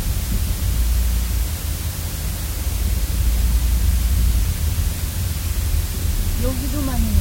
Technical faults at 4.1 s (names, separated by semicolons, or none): low bit depth with dither